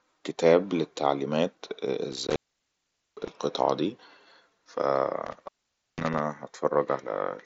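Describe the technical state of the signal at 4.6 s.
At 4.6 s the speech is intact, carried normally through the Bluetooth mSBC headset path with its usual band limit near 7.7 kHz.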